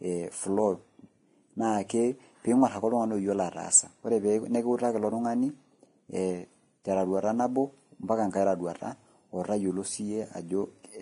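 All the way through, the speech has nothing above 10.6 kHz and sounds hissy and grainy with smeared attacks, likely heavy Vorbis compression at a low bitrate.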